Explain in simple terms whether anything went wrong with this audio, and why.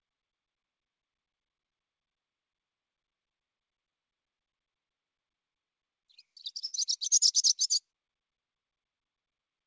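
At about 6.66 s the sound briefly hangs, held a little too long with a faint buzzy dip until 6.75 s. This is a short stall from a late packet. A piece of audio arrived late on the call, so the receiver stretched the last sound for about 73 ms, then carried on, losing nothing.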